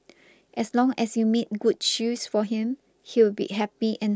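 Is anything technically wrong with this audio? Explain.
No, nothing technically wrong turns up on listening; the speech comes through without any audible fault.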